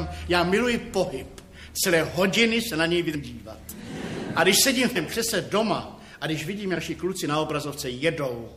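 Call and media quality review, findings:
Compressed frames skipped at 3.14, 4.95 and 6.76 s. The audio jumps ahead by roughly 200, 400 and 100 ms, which fits runs of dropped 23.2 ms frames at the decoder. Overlapping frames smear each join into a soft blip. On a spectrogram, each shows as a vertical seam with discontinuous harmonics.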